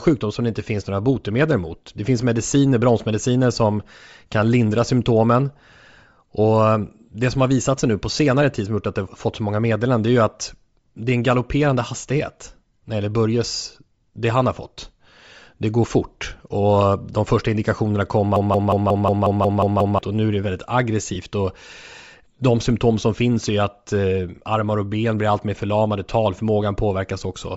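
Bluetooth LC3 compression, throughout: the speech has a plainly audible breathy, grainy edge and a thin top end, likely from LC3 coding at a low bitrate, around 32 kbps, zeroing upper spectrum and filling it with noise.

Broken-record loop, 18.36 to 19.99 s: after "de första indikationerna kom", a 180 ms fragment repeats back to back nine times before "och nu är det", likely a stalled stream resending its last fragment, losing the audio meant for that span.

Lost LE Audio frames, 21.15 s: just after "nu är det väldigt", a 7.5 ms dropout fits one lost frame, concealed by reusing the previous spectrum with random signs.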